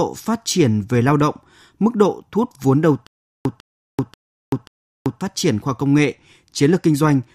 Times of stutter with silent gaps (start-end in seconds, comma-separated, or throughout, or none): 3.07-5.21